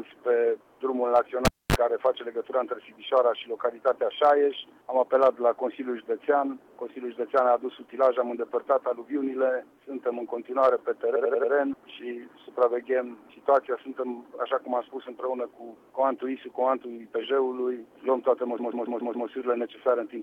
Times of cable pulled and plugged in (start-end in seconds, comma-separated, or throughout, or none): 1.45-1.76